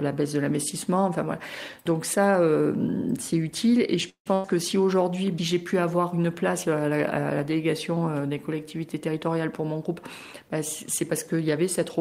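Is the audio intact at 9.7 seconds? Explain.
No. From 8.94 to 9.80 s a jitter buffer speed-up is under way: the receiver trims short pitch-period slices to drain excess buffered audio, losing about a tenth of a second. The sound runs about 11% faster and hurried, yet keeps its pitch, unlike a sample-rate speed-up.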